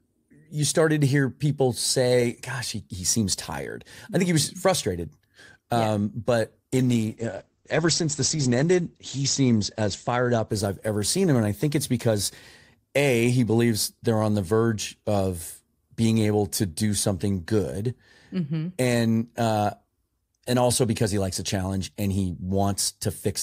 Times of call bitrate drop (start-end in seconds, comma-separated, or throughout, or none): 6.73-13.50